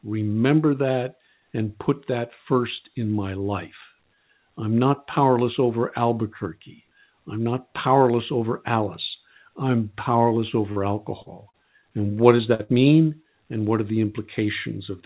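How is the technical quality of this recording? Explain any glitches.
The recording has audible network dropouts in its last few seconds, all between 10.7 and 12.7 s. It is band-limited to telephone quality, with nothing above 4 kHz, which fits a G.711 A-law call path at 64 kbps.

Short concealed packet loss occurs at 10.72, 11.22, 11.50 and 12.37 s. Each is roughly 20 to 40 ms of audio that arrived too late. The receiver extended the preceding sound and then blended back, leaving brief smears or wobbles.

A burst of packet loss occurs at 12.54 to 12.61 s and again at 12.63 to 12.70 s, with about 40 and 60 ms lost. Concealment held the last sound while fading it, so you hear a short buzz or hiss before the audio resumes with material missing.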